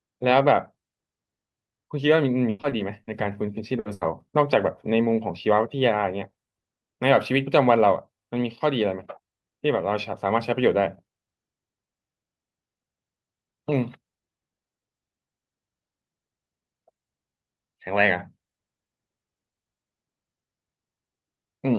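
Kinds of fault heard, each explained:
Repeated packet loss (robotic sound): from 2.49 to 3.09 s packets keep going missing. Five gaps, the longest 100 ms, are each filled by extending the last sound, about a third of that span. The result is choppy, robotic speech with 200 ms of content gone.
Burst of packet loss: two short runs of lost packets, at 3.79 to 3.87 s and 3.93 to 4.03 s. The receiver holds the last sound for 60 ms and then 80 ms, fading it as it goes, before speech resumes further on with that material missing.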